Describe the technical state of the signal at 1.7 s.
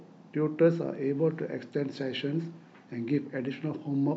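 The audio is intact at 1.7 s, with no technical fault present at that point in the speech.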